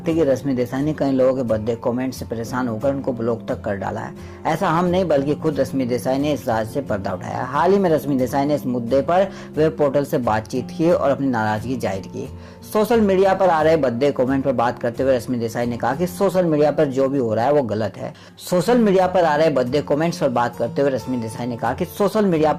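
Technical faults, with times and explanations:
0.0–6.0 s, adaptive stream starting at a low bitrate: treble is thin and artefacts heavier, consistent with a low Opus bitrate, then quality steps up abruptly without a gap as the player switches to a higher-bitrate version.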